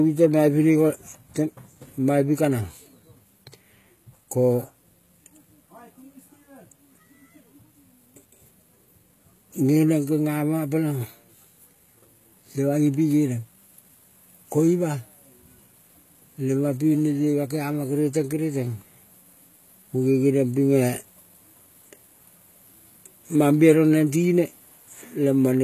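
From start to finish the treble sounds synthetic, with s sounds turning gritty and lispy and nothing at all above 14.9 kHz. The cause is likely HE-AAC compression, which rebuilds the upper band from copied lower bands, and the plainly audible damage points to a bitrate near 20 kbps.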